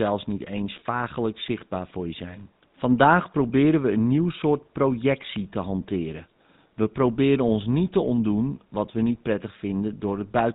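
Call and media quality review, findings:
GSM full-rate codec across the whole clip: pulse-excited vocal-tract model, nothing above 4 kHz. Speech buzzy and gravelly throughout, consistent with a 13 kbps full-rate link.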